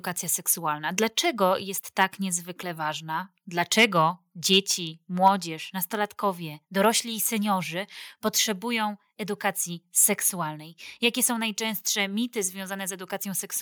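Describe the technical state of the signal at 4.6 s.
Around 4.6 s, from 4.53 to 4.57 s, a loud stretch of the speech picks up a brief crackling, flattened edge as its loudest peaks lose their rounded tops. This is microphone overload: the input gain was likely set so high that the signal ran about 2 dB past what the converter could represent, so the tops of those peaks were cut off. Only a small share of the samples in that span, roughly one or two percent, are affected.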